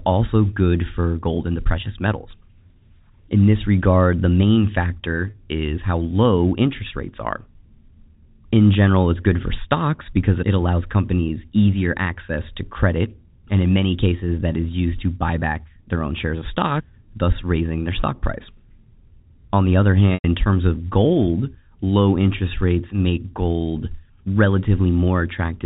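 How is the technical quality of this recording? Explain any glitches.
Two short dropouts interrupt the speech, carried over a G.711 telephone-band line. Both are packet loss with pitch repetition. At 5.30 s, just before "is how low interest," a 40 ms gap is bridged by repeating the last pitch period, heard as a brief buzzy hold. At 20.14 s, between "the other" and "in terms of," a 100 ms loss outlasts that repetition, fading to silence before a quick cross-fade back.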